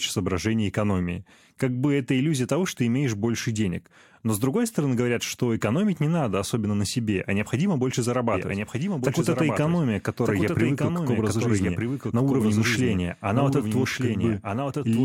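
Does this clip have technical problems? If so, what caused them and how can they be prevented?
Yes. From 8.34 s to the end, the speech has a doubled audio track: a second full-band copy trails about a second behind, a few dB quieter, likely from a slower capture path. Unlike a room echo, it has no decay or reverberant colour and starts abruptly. Monitor with only one capture route active to prevent it.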